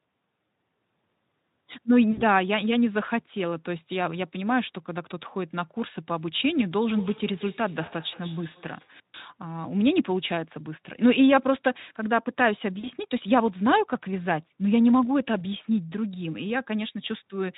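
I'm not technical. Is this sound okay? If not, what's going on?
No. VoIP packet loss concealed by the speech codec happens at 2.11 to 2.23 s, 7.85 to 7.88 s and 12.79 to 12.89 s. Bits of the call went missing, and the receiving software filled each gap by guessing from the last sound, so you hear brief buzzy or blurred patches that fade.

Feedback echo between two devices runs from 6.95 to 9.01 s. Two devices in the same room were on the call, and one microphone picked up the other's loudspeaker. Each sound comes back faintly about a fifth of a second later, thinner and ringing.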